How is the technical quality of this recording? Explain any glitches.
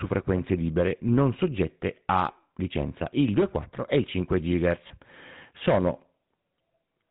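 The recording has two technical problems: GSM full-rate coding that runs through all of it, and a brief dropout from lost GSM frames near the end.

The GSM full-rate codec is present throughout the speech. The codec reduces the voice to a vocal-tract model driven by a regularly spaced pulse train and keeps only a thinned-out excitation. Nothing above 4 kHz survives. The damage is plainly audible as a buzzy, gravelly roughness and a muffled top end. The coarseness points to the low 13 kbps full-rate mode.

Lost GSM frames cause a short glitch from 4.88 to 4.91 s. When the decoder missed good data, it reused the parameters of the previous frame instead of leaving a hole. The result is a brief rough, metallic ring that stands in for the missing audio. It lasts about 20 ms, which fits a single dropped frame, so it never fades to silence.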